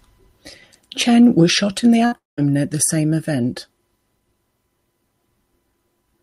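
Speech, with two technical faults close together. The first is a burst of packet loss from 2.05 to 2.14 s, just after "was shot in the". About 60 ms of audio never arrived. The receiver stretched the last sound over the hole instead, for roughly 63 ms, fading it as it went. Speech then picks up a little further on, with that slice missing. The second fault follows at once, from 2.18 to 2.39 s, still before "at the same event". It sounds like a long network dropout, likely a stall where nothing reached the player. The last sound is again carried on and fades out. About 170 ms of near silence follows. Roughly 200 ms of speech is lost, and the audio resumes past the gap.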